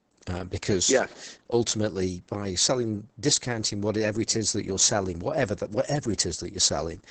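From start to finish the speech sounds muffled and hoarse, with a faintly robotic edge, and nothing comes through above about 8.8 kHz, so sibilants lose their crispness. This is Opus voice compression running its SILK linear-prediction coder in wideband mode. The heavy damage points to a bitrate around 10 kbps, where the excitation signal is coded so coarsely that the natural breathiness of the voice is replaced by that rough, synthetic texture.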